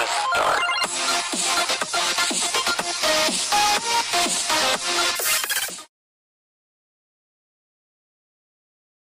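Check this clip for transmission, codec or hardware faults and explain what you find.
One fault is present. From 5.16 s to 5.70 s the audio was read two samples at a time, so it plays at double speed. The reader treated each pair of adjacent samples as a single frame, as if the stream had two channels or wider samples. Consuming the data twice as fast doubles the playback rate and raises the pitch by an octave, and content above the reduced Nyquist limit folds back.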